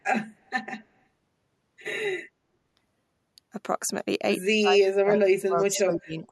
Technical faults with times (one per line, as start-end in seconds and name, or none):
0.00-6.31 channel delay (comb filtering)
0.46-0.50 echo leak
4.43-6.23 speech suppressed in double talk
5.15-5.19 echo leak
5.73-5.79 echo leak